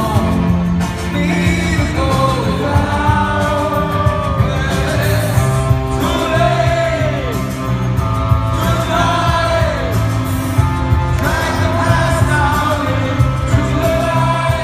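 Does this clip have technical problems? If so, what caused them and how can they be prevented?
No, there's nothing technically wrong to hear here, so there's no cause to track down and nothing that needs preventing.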